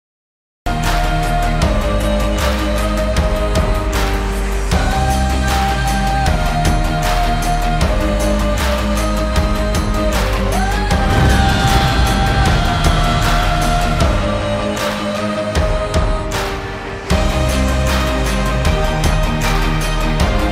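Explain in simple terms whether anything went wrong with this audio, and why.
The sound jumps in abruptly at 0.66 s after a short stretch of dead silence, with no natural start. This is a cut-off start: recording began late.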